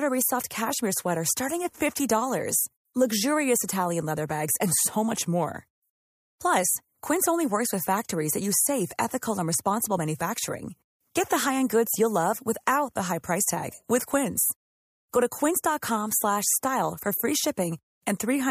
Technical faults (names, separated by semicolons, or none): none